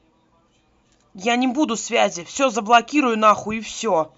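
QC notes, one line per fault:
No faults found in this recording.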